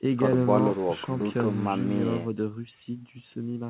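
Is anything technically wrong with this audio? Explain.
No, nothing here is technically wrong.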